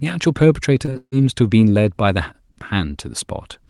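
At 0.85–0.89 s and again at 0.93–0.97 s, short concealed packet loss smears the speech briefly. Each roughly 20 ms hole was filled by extending the preceding sound. Then from 0.97 to 1.14 s a burst of packet loss removes about 160 ms. The decoder's continuation fades over 150 ms. A flat-lined 60 ms follows before the speech resumes, showing as a tapering band then an empty strip.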